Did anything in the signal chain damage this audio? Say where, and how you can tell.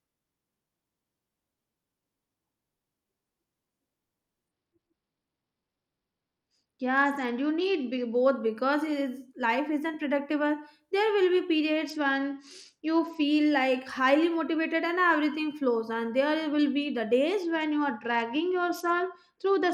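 Yes. The codec stage suffers a Bluetooth SBC bit pool drop at 4.49–8.16 s, 11.85–13.23 s and from 17.42 s to the end. The treble dulls and gritty quantisation noise rises, which fits the encoder falling from bit pool 31 to 11, about 83 kbps, starving the upper sub-bands.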